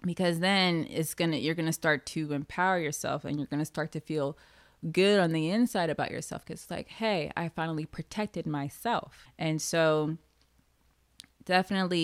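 No technical faults can be heard anywhere in the speech recording. There is nothing in it to mark at any point in time.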